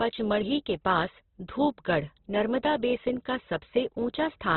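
Speech that carries Opus compression damage from start to finish, heavy throughout: nothing is heard above about 4.2 kHz, and what remains sounds rough, grainy and noisy rather than swirly. This is likely a low bitrate, around 12 kbps, forcing a narrowband music-mode encode.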